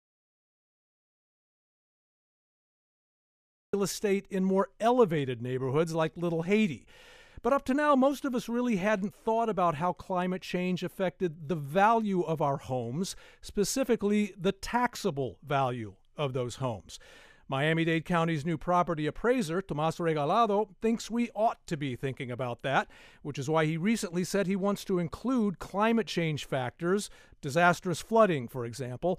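Audio dropout to silence runs from the very start to 3.73 s: the clip opens in silence, with no room tone at all, until the sound cuts in mid-flow. The input was likely lost, so silence was written and whatever preceded is gone.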